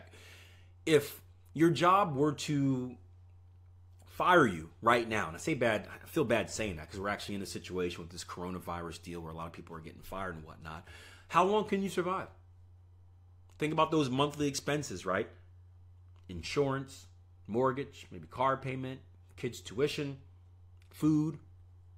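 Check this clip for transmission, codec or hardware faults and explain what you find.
Nothing stood out on listening to this speech that would point to a problem in how it was sent, encoded or recorded.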